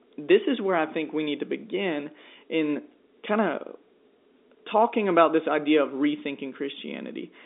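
No technical faults occur at any point; the speech simply carries the narrow band of an ordinary telephone line, with nothing above about 3.7 kHz.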